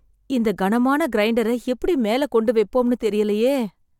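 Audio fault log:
Nothing stood out on listening to this speech recording.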